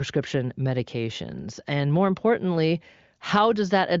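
Speech, with no technical fault to be heard. The sound stops at about 7.5 kHz and stays clear, which points to the AMR wideband (HD Voice) codec running at a high rate, around its 23.05 kbit/s top mode.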